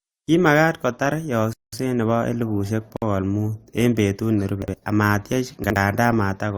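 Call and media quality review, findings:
Playback stall, 1.53 to 1.73 s, just before "nebo elibushek". Speech cuts out for about 0.2 s, then resumes. Likely cause: player buffer ran dry or its output thread blocked. Output held silent until data or scheduling recovered.

Gap at a join of encoded pieces, 2.97 to 3.02 s, right after "nebo elibushek". A 54 ms hole in continuous speech. Edges smeared by the codec. Component: segment concatenation. Encoder start delay and last-frame padding left untrimmed at the splice.

Chunks out of order, 4.62 to 4.74 s and 5.64 to 5.76 s. Brief jumbled spots. Each spans two 60 ms chunks, one arriving a chunk late and playing after its successor. Component: packet reordering or write path. Nothing lost, sequence wrong.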